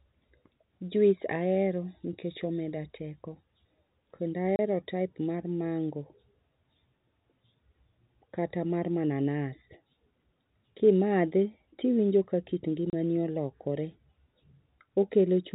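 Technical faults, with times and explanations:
4.56 to 4.59 s and 12.90 to 12.93 s, packet loss filled with silence: the audio drops out for 30 ms twice, once just before "type mar mango" and once just after "tiwinjo ka kit". Each hole matches one missing 30 ms packet. The receiver plays digital silence in its place, so the signal stops and restarts abruptly. Those hard edges cut sharply into the narrowband telephone-coded sound.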